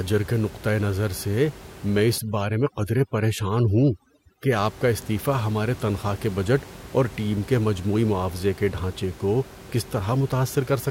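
From 2.18 to 4.52 s, overdone noise removal strips bands that sit near the estimated noise floor, so the room noise, elsewhere about 19 dB below the speech, drops and breaks up into twinkling specks, and quiet parts of the speech go with it. A spectrogram shows scattered isolated dots and gaps.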